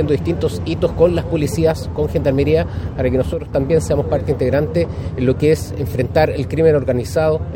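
A sudden gain jump runs from 3.33 s to 3.53 s: the level of the audio drops abruptly by about 6 dB, with the background noise falling by the same amount at the same instant, then returns just as abruptly after roughly 0.2 s. Because signal and noise move together with no fade, the change happened in the digital gain stage rather than at the source, likely a level setting or bit shift applied instantly without a ramp.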